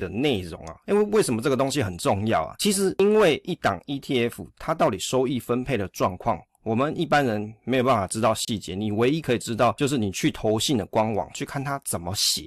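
At 8.45 s the speech drops out for about 28 ms, resuming at 8.48 s. That's a gap at a join of encoded pieces. Two sections went through the encoder separately and were stuck together untrimmed, so the encoder's start-up delay and last-frame padding both sit at the seam as silence. You hear a short hole, its edges smeared by the codec, and then the speech simply resumes where it broke off.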